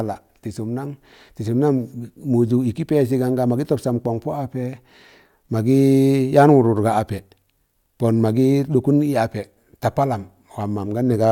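A speech recording with no technical faults to report.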